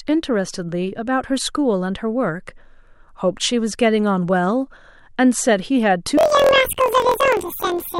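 From 6.18 s to the end at about 8.00 s, the speech jumps an octave high and takes on a rapid flutter near 43 Hz, while its overall pace stays normal. This is planar audio read as interleaved. Each block stores all left samples and then all right samples, but it is read as alternating pairs. Every block of about 23.2 ms, which fits a 1024-sample block, therefore plays twice at double speed, first left and then right.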